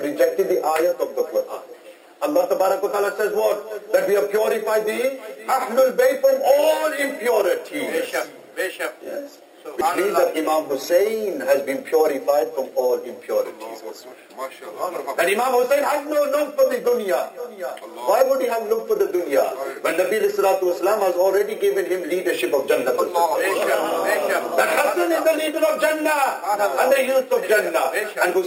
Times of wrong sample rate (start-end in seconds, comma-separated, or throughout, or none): none